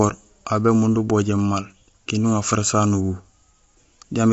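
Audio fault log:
throughout: low-delay AAC compression, grainy, rough speech with nothing above 7.7 kHz; likely short low-delay frames smearing harmonics, fitting a starved bitrate near 24 kbps.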